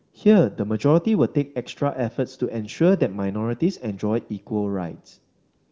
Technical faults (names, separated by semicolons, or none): none